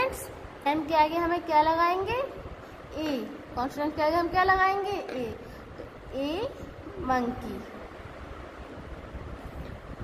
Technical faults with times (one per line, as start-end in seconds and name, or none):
0.65 compressed frames skipped